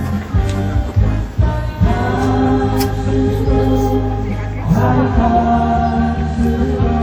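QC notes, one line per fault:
Throughout, WMA compression: the audio rings and smears, with a washy hiss that swells and fades with the signal. This is likely a transform codec at a low bitrate, around 48 kbps, spreading quantisation noise across long blocks. Content extends to about 20.1 kHz.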